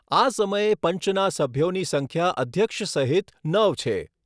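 Nothing goes wrong anywhere in this stretch of speech, so there's simply no technical fault to point to.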